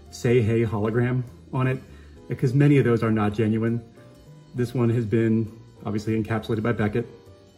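No technical faults can be heard anywhere in the audio.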